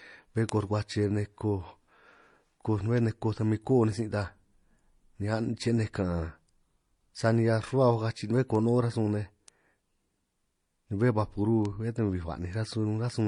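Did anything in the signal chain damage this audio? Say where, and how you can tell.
Yes. At the codec stage, the speech shows transcoding between lossy codecs throughout. A spectrogram shows a hard ceiling near 10.7 kHz, with smeared, watery artefacts layered on top. This points to an MP3 at about 40 kbit/s likely re-encoded as HE-AAC near 48 kbit/s.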